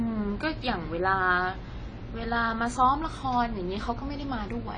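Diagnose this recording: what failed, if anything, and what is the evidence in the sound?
The codec stage failed: the speech has likely been through AAC compression at a low bitrate, which fits AAC-LC at around 24 kbps. Throughout, nothing remains above 9.9 kHz, so the sound is dull, and coarse quantisation leaves a smeared, warbling, fizzy texture on sibilants.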